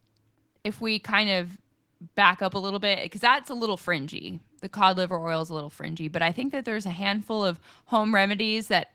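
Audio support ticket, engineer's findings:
Clock drift between sender and receiver: sender clock running roughly 1.5% slow, jitter buffer draining. Waveform shows uneven small seams throughout, not a single break.

Repeated timing corrections, 0.36 to 8.37 s: receiver repeating short pieces, about 150 ms added overall, effective speed 98%. Spectrogram shows brief duplicated slices at irregular spacing.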